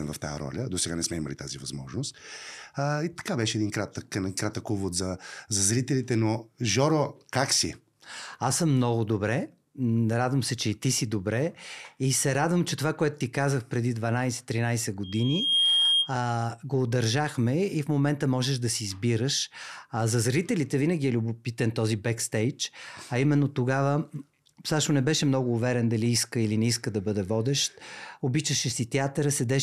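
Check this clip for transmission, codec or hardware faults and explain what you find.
There's one fault: loudspeaker feedback squeal from 15.03 to 16.15 s. A 3.2 kHz tone swells over roughly half a second until it's a few dB above the speech, then stops just before "го удържахме и в". The mic was picking up its own speaker.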